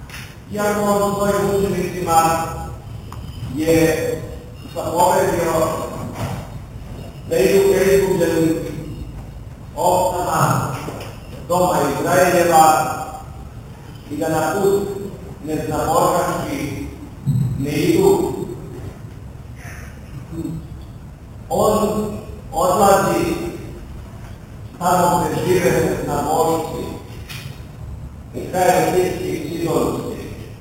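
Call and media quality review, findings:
Imaging from sample-and-hold upsampling, present throughout. Bright metallic fizz riding on the sound, rising and falling with its level. Fits 8 kHz material raised to 48 kHz by repeating samples with no smoothing filter. Spectrogram: mirrored copy of the band from 4 kHz to 8 kHz, about 17 dB below the signal, its contours running opposite to the pitch, with further copies stacked at each multiple of 8 kHz. Waveform: visible staircase steps.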